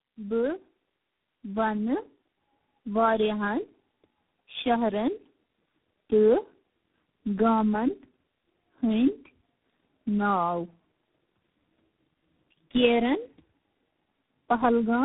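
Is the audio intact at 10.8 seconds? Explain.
No. At 10.8 s the speech is affected by tandem speech coding, which runs through the whole clip. The sound is coded and decoded repeatedly, likely through three low-rate speech codecs, each reworking the previous one's errors. That compounding makes it rougher and more warbly than any single codec would. Nothing reaches above 3.8 kHz.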